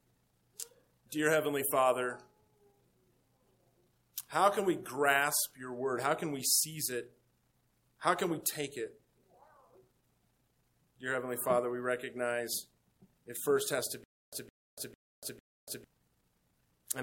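From 14.04 to 15.84 s the audio falls into a stutter with silent gaps: a 164 ms fragment repeats four times, each followed by 287 ms of dead digital silence, giving an even 451 ms cycle. The stream likely stalled and replayed its last buffer on each retry, so audio in that stretch is lost. The exact repeats and true silence separate it from random dropouts.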